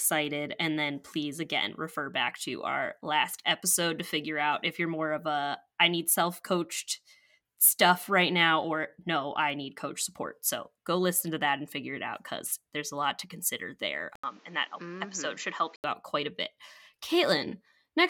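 Speech, where after "lot to consider there" the sound dulls from 14.16 to 15.84 s, with nothing above 7.6 kHz, an 80 ms gap and a new noise floor about 30 dB down. The level barely changes. That gap and the different noise point to an input switched to a poorer device, likely, rather than a filter, before "out quite a bit".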